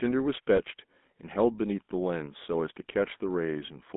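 Right from the start the whole clip carries GSM full-rate codec damage, and it's plainly audible. The band runs only from about 200 Hz to 3.6 kHz, and the pulse-driven vocal-tract model gives the speech that buzzy, gravelly grain. The rough quality fits the old 13 kbps full-rate coder.

Between 0.56 and 0.60 s there's a short patch of lost GSM frames. The decoder covered the gap by repeating the last good frame's settings, so the sound briefly hangs as a metallic ring. It's short enough to suggest a single dropped frame.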